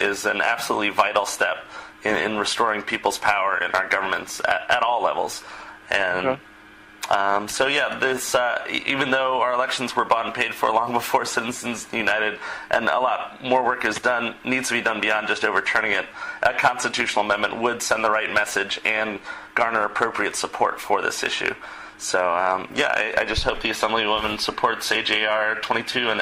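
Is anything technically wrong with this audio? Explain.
No, nothing technically wrong can be heard in this audio.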